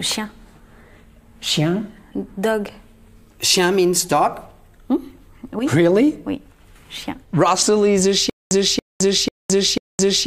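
From 8.30 s to the end, a 280 ms fragment repeats four times, each followed by about 214 ms of dead digital silence, pulsing every 493 ms. This stutter with silent gaps likely comes from a stalled stream replaying its last buffered fragment, losing the audio meant for that stretch.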